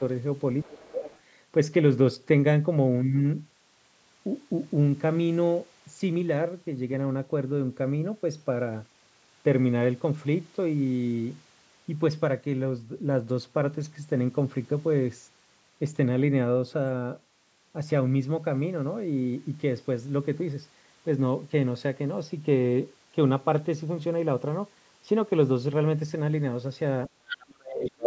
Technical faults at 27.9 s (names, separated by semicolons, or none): speech suppressed in double talk; other side's voice leaking through